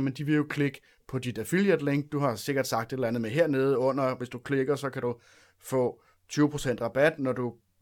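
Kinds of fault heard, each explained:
No technical faults can be heard in this recording.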